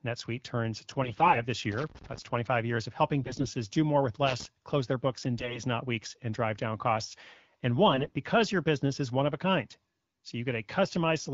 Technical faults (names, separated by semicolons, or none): AMR bit errors; loose connector crackle